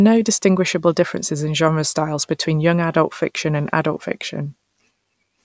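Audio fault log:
No audible faults detected.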